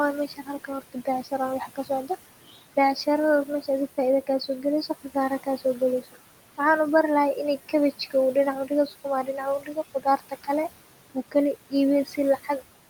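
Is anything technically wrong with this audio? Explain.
Yes. Noise suppressor artifacts run throughout. The suppressor lowers the room noise by about 17 dB frame by frame, so the noise sinks between words and rises under them.

Speech cut by the noise suppressor occurs at 0.28–2.1 s, 3.97–6.16 s, 8.67–10.48 s and 12.05–12.49 s. The suppressor mistakes quiet speech for noise and turns it down by up to about 16 dB in the first three stretches and about 13 dB in the last. Each stretch has roughly a fifth to half a second of swallowed sound, seen as abrupt notches in the waveform envelope.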